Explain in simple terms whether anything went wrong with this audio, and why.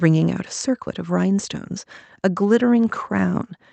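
Nothing went wrong with this speech recording.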